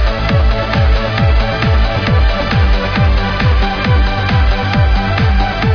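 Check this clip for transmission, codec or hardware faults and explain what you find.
No technical faults can be heard anywhere in the signal; it stays continuous and stable throughout.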